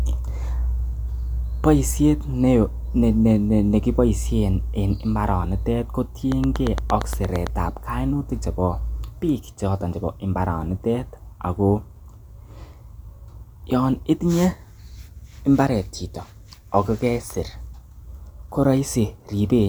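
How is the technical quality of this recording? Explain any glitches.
The recording has one clear glitch. From 6.32 to 7.48 s, between "en mbaranitet" and "ab kainutik chebo biik", a train of clicks ticks regularly at 8.7 per second, around ten pulses well above the speech, likely from electrical interference. A spectrogram shows evenly spaced vertical lines, and the waveform shows sharp spikes.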